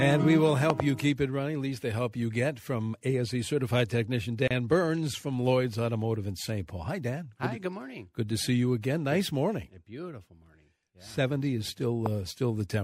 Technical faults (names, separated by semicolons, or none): loud pop; gap at a join of encoded pieces